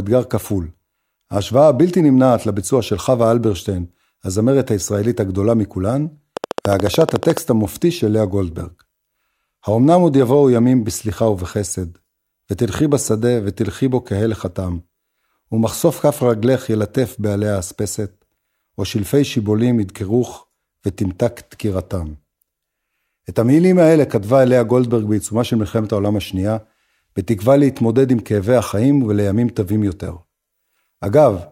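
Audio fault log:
6.37–7.38 s, train of clicks: a regular run of roughly fifteen near-identical pulses at 13.9 per second, peaking about 15 dB above the speech, heard as steady ticking over the voice. The likely cause is electrical interference or a faulty connection or power supply.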